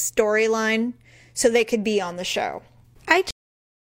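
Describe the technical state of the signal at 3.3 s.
At 3.31 s there's a quick burst of damaged data in the compressed stream. A bit of the coded speech got corrupted, so the decoder misreads that frame, loses sync and hunts for the next valid header. You hear it as a brief chirp, squawk, click or short hole.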